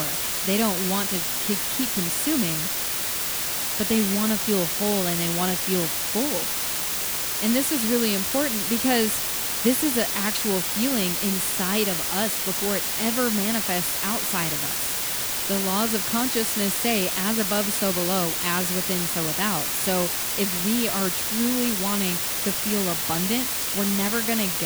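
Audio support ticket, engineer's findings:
Low bit depth with dither, whole clip: constant even hiss, roughly as loud as the speech. Fits 3-bit quantisation with dither. No signal-following grit, unlike undithered truncation.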